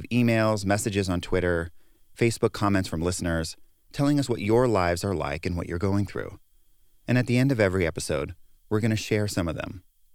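No technical faults can be heard anywhere in the recording; the speech signal stays continuous and steady throughout.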